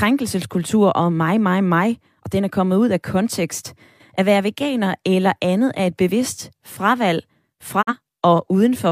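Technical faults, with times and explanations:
7.81 to 7.93 s, digital broadcast dropout: right after "er et bevidst fravalg" the speech fades to silence over about 20 ms, stays muted, then resumes. Roughly 43 ms of programme is simply gone, which fits a single corrupted frame that the receiver rejected and muted rather than played. Unlike packet-loss concealment, nothing fills the hole with smeared or repeated sound. Unlike a hard edit, the quick fade gives the cut a softened start.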